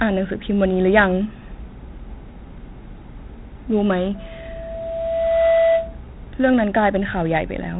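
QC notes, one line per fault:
Throughout: 4-bit ADPCM compression. Each sample is coded as a coarse 4-bit step from a prediction, leaving gritty hiss that rides the speech level and smears sharp attacks; nothing above 3.9 kHz survives, which fits a roughly 8 kHz sample rate and 32 kbps. Damage is heavy.
4.15–6.03 s: loudspeaker feedback squeal. A tone at 661 Hz swells over roughly a second and a half to around 10 dB above the speech, as the microphone-to-loudspeaker loop gain exceeds one at that frequency, then stops.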